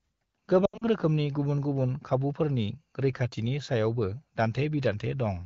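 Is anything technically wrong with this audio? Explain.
Yes, there are lost AMR speech frames between about 0.65 and 0.84 s. Roughly 120 ms of audio goes missing, scattered over 0.16 s, with the longest gap about 80 ms, which fits several 20 ms frames failing their checksum. The wideband decoder papers over each hole by repeating the last good pitch and vocal tract settings at falling gain, so you hear brief smeared, warbly dips that sag toward silence before the speech comes back a bit weak and rough.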